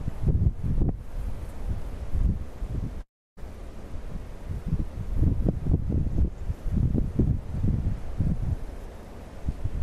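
From 3.01 to 3.39 s the sound breaks off and is replaced by a continuation of its last moment that decays, leaving about 290 ms of silence before the audio returns. A long network dropout is the likely cause, with the receiver filling about 353 ms while roughly 360 ms of material never arrived. Unlike a pause or a stall, the audio does not pick up where it stopped; it resumes further on, with that stretch missing.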